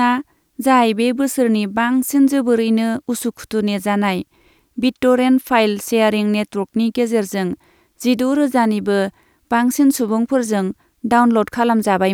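Listening to the speech recording, nothing stood out as a technical problem at any point.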